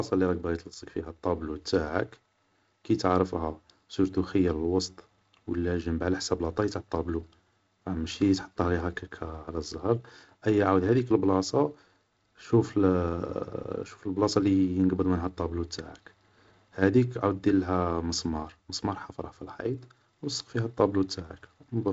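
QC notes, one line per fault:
Nothing to flag here: the speech comes through G.722 wideband telephone coding at 48 kbit/s, with the light upper-band hiss of that codec and nothing above about 7.8 kHz.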